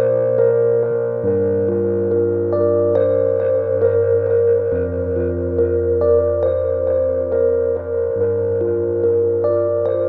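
Listening closely to this recording of everyday sound, nothing stood out as a technical fault at any point.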